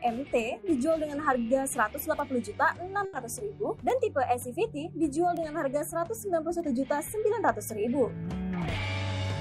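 The audio carries two kinds of digital transmission fault. Single sharp ticks at 2.20, 3.90, 5.37 and 6.60 s are bit error spikes: one flipped bit throws a single sample far off by a power of two, giving a broadband click unrelated to the surrounding sound, unlike a dropout, which leaves a gap. Between 3.05 and 3.15 s a burst of packet loss is heard: for about 80 ms the receiver stretches the last sound and fades it out, then the audio resumes with roughly 80 ms skipped. The held, fading fill and the jump forward set it apart from a plain silent gap or a clean edit.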